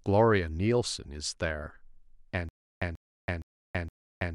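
Speech clip with a stutter with silent gaps from 2.49 s to the end: a 138 ms burst repeats four times every 466 ms with 328 ms of dead silence between, likely a stalled stream retrying.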